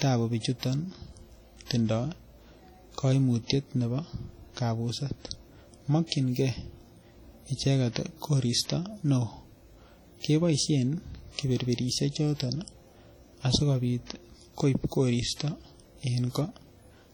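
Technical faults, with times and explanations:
Throughout: WMA compression is the likely cause of the heavy transform-codec damage on this speech. Quantisation noise smears over tens of milliseconds, giving a ringing, washy character and hiss that breathes with the signal. Weak spectral detail drops out, which fits a bitrate around 32 kbps, and nothing is present above 19.8 kHz.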